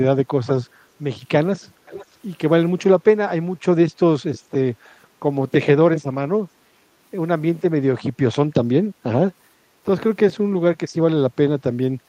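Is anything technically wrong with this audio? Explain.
Yes. From 1.86 to 2.06 s a faint, delayed copy of the speech, far quieter than the direct voice, trails it by about 0.49 s. This is an echo leak, likely a far-end loudspeaker's sound reaching its microphone and slipping past an incomplete echo canceller.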